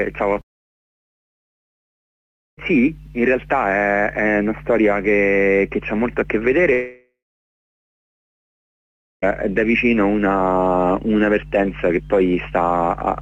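At 0.33 to 0.37 s there is a short concealed packet loss. About 20 ms of audio failed to arrive, and the receiver bridged it by extending the preceding sound and blending back in. It is heard as a brief smear or wobble rather than a gap. What separates it from a dropout is that nothing goes quiet: the sound carries straight through.

Right after, from 0.41 to 2.59 s, the audio cuts out for about 2.2 s. A short tail fades almost at once, leaving roughly 2.1 s of silence before sound resumes. The same thing happens from 6.73 to 9.24 s. This time a fading continuation lingers for a few tenths of a second before about 2.1 s of silence. The likely cause of both is a long network dropout: no packets arrived for seconds, concealment ran out, and the missing audio was never played. Unlike the short loss, these leave a plain hole in the sound.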